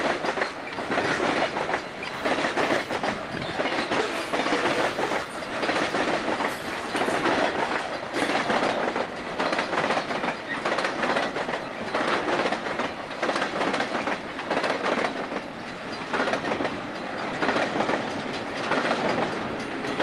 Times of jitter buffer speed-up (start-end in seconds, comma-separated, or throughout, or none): 5.23-5.60, 8.94-11.78